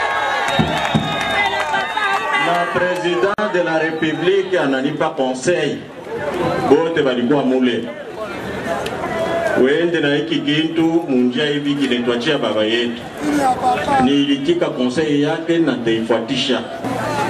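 At 3.34 s the sound drops out for about 44 ms, returning at 3.38 s. This is a gap at a join of encoded pieces. The audio was encoded in separate sections and then butted together untrimmed. Each section kept its encoder's leading delay and the padding on its final frame. That leaves a short hole of silence. Its edges are smeared by the codec. The sound then resumes exactly where it stopped.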